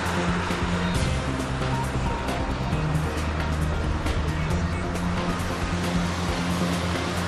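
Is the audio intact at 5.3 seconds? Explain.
Yes, the audio is intact at 5.3 seconds, with no fault at that moment.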